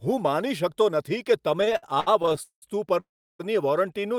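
From 1.61 to 2.64 s there are repeated stalls, a stutter. The jitter buffer kept running dry. Twelve short holds, the longest 0.19 s, stretch the speech and drag it.

At 3.00 s comes a call audio freeze. The sound hangs, then falls silent for about 0.34 s. It resumes at 3.41 s, likely after delayed packets arrived. Nothing is lost.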